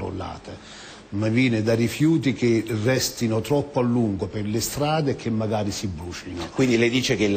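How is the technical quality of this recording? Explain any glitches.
No glitches turn up here at all; nothing in the recording trips, drops out or breaks up, so there's nothing to explain.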